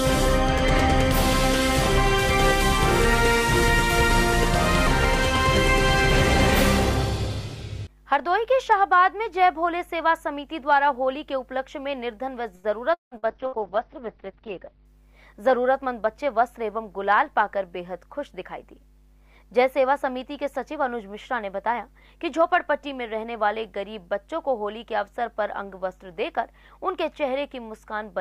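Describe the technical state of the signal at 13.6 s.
At 13.6 s, two faults overlap. Repeated packet loss, giving a robotic sound, runs from 12.55 to 13.61 s. Four gaps occur, the longest 177 ms. Each is patched by stretching the previous sound, so over a third of the span is filler. The result is choppy, with pieces missing.

A call bitrate drop begins at 13.31 s and lasts until 14.91 s. The encoder is starved of bits, which fits a fall from about 64 to 8 kbps. The top end collapses from 20 kHz to 6 kHz, leaving the sound muffled, rough and watery.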